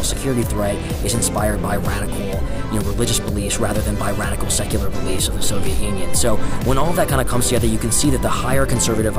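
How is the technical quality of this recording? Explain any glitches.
The recording has one clear fault near its end: hard clipping from 6.71 s to 9.07 s. For that stretch the signal runs about 2 dB past the level the chain can carry, so every peak that exceeds the limit is sliced off flat instead of completing its curve. Because the overload is mild, it sounds like a gritty crackle riding on the loudest moments rather than a constant fuzz. On the waveform the peaks appear squared off against a fixed ceiling. On a spectrogram, vertical streaks of added harmonics reach well up into the high kHz range wherever those peaks occur.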